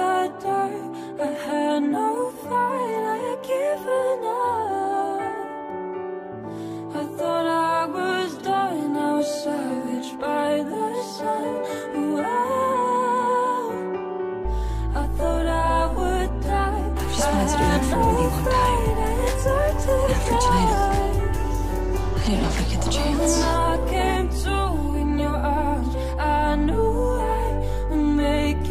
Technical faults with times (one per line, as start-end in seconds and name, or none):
none